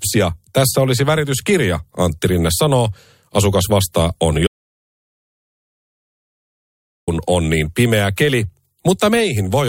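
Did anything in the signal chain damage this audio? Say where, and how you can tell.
Yes. An audio dropout to silence runs from 4.47 to 7.08 s, after "vastaa on" and before "on niin pimeä keli". The 2.6 s of silence, with no room tone at all, sets it apart from a noise gate. The likely cause is a lost input link while the recorder kept writing zeros.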